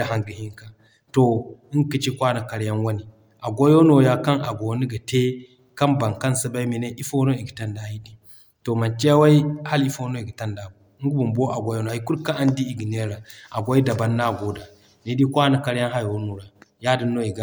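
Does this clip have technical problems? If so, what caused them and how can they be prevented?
No, there are no technical problems in this clip.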